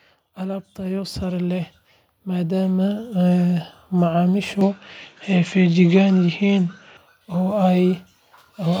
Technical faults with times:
0.37-3.11 automatic gain rising

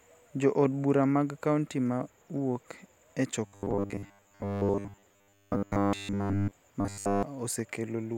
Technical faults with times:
3.46-6.52 robotic sound from repeated short buffers
6.81-7.23 robotic sound from repeated short buffers

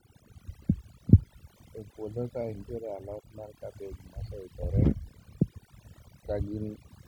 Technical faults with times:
0.00-7.07 overdone noise removal

